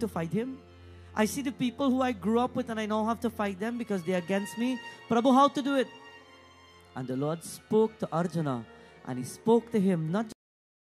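A cut-off end stops the audio abruptly at 10.32 s, with the final buffers never written, leaving flat digital silence with no decay: a vertical edge on the waveform and spectrogram.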